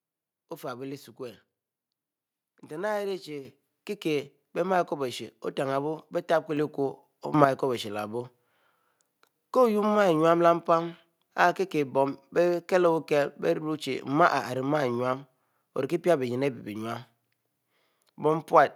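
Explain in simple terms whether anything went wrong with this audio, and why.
Two things go wrong here, and both make the whole recording suddenly louder.

At 3.45 s there's a microphone volume stepped up. The call software decided the mic was too quiet and turned up its input level in one go rather than gradually. You can hear the voice and the background jump up together, and the recording stays at that higher level afterwards.

Around 7.34 to 7.45 s there's another sudden gain jump. The level leaps up abruptly, again taking the voice and the background noise up together. The likely cause is a digital volume setting being applied in one step, with no smooth ramp between the old and new level, so the change lands instantly instead of easing in.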